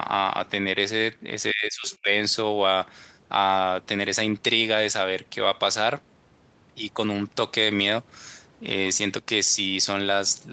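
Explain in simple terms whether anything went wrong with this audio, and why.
Speech suppressed in double talk, from 1.52 to 2.09 s: the voice sinks almost to silence for about half a second. The likely cause is both sides talking at once, so the call's echo canceller couldn't tell this talker from the loudspeaker echo and turned everything down.

Other side's voice leaking through, from 1.88 to 1.97 s: a faint scrap of a second voice slips in. It's likely the far end playing on this device's loudspeaker, with the echo canceller failing to remove all of it from the microphone.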